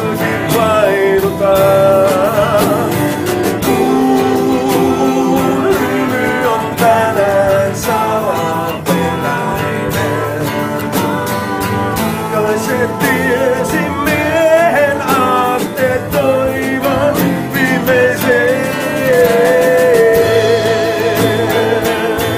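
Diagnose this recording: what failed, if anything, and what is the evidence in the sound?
Nothing stood out on listening, so no stage of the chain shows any sign of having failed.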